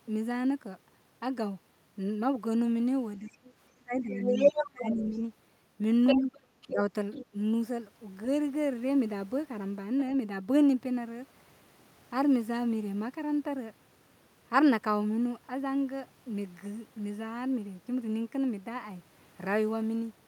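Around 3.19 to 3.38 s the talker dips by about 20 dB, and from 3.73 to 5.13 s it sinks by about 25 dB. That's speech suppressed in double talk, likely an echo canceller ducking everything while both ends talk. The other side's voice is leaking through: a faint scrap at 3.44 to 3.52 s, then 4.01 to 5.2 s sitting louder than the talker. It leaks again at 6.07 to 6.72 s at roughly equal level, with brief 10 dB dips at 6.15 and 6.71 s, and a quieter trace at 7.13 to 7.26 s, likely residual loudspeaker echo the canceller missed.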